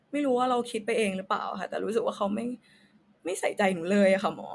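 No technical faults can be heard anywhere in the recording; the signal stays intact and continuous throughout.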